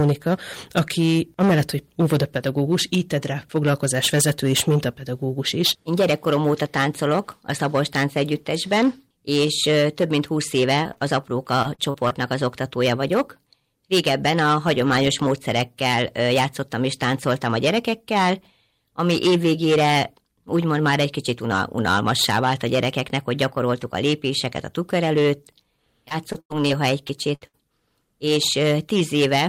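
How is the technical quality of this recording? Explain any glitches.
The recording is technically poor: the speech is clipped throughout, and a damaged network path adds dropouts and concealment artefacts in two clusters, around 11 s and between 26 and 27.6 s.

Hard clipping runs through the whole clip. The signal was driven about 11 dB past what one stage could pass, so a small but steady share of samples, roughly one in twenty, have their peaks sliced flat. Those flattened tops generate harmonics high in the spectrum, heard as a harsh, fuzzy edge on every louder syllable rather than an occasional crackle.

Short concealed packet loss appears at 10.83 to 10.87 s, just after "és több mint húsz", then at 10.93 to 10.98 s and 10.98 to 11.03 s, and again at 27.07 to 27.11 s. Each hole is 20 to 40 ms of audio that never arrived. The decoder bridged it by extending the preceding sound and crossfading back. 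The result is a quick smear, and at 10.9 to 11.0 s two back-to-back patches give a brief wobble.

Repeated packet loss occurs at 11.63 to 12.12 s, ending just before "az oktatója vagyok", and again at 26.08 to 26.71 s. Each stretch holds four gaps, and about a quarter of each span is synthesized fill. The longest gap is 40 ms in the first stretch and 95 ms in the second. Because the holes arrive in quick succession, the patched segments chain together and the speech turns choppy, with fragments missing.

Two bursts of packet loss follow at 27.35 to 27.43 s and 27.47 to 27.55 s, each removing about 60 ms. Here the concealment held the last sound and faded it as the gap lengthened. A voiced sound becomes a short frozen buzz, and anything else becomes a dying hiss. The speech then resumes with that slice of content gone.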